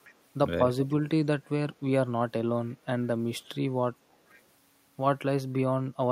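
Faint, delayed copies of the speech surface in brief scraps at 0.04–0.14 s, 0.90–0.94 s, 2.68–2.75 s and 4.11–4.41 s, trailing the original by about half a second and sitting well below it. This is echo leak, likely a far-end loudspeaker echo canceller failing to remove everything.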